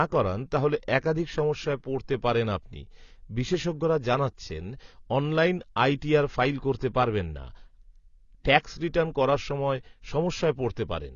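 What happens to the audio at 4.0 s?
At 4.0 s the speech is dull and smeared, with nothing above 6.9 kHz, as it is throughout; likely AAC compression, its sound pointing to a bitrate near 24 kbps.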